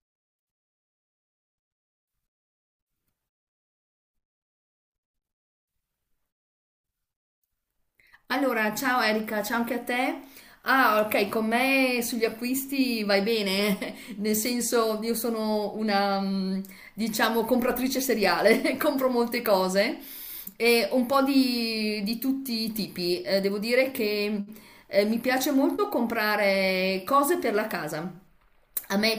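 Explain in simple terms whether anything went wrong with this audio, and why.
Nothing went wrong here: the speech comes through intact, with no dropouts, glitches or other technical faults to point to at any moment.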